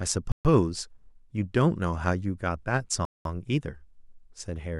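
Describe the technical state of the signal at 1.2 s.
At 1.2 s the speech signal is intact, with no dropout, clipping, distortion or other technical fault to be heard at that point.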